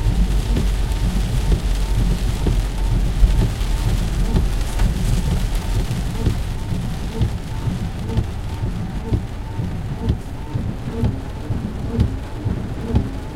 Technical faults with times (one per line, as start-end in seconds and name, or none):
none